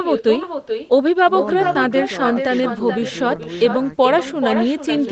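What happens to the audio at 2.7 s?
At 2.7 s, as throughout, an echo with no canceller trails the speech by roughly 0.4 s at about 7 dB down, drawing a fainter duplicate of each waveform burst and spectrogram pattern.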